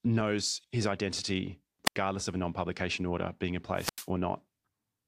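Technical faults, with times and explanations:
1.85–1.96 s and 3.75–4.08 s, wireless microphone squelch dropout: the fading radio link brings a hiss rise, then squelch mutes 81 ms and 89 ms, flat waveform gaps and blank spectrogram columns.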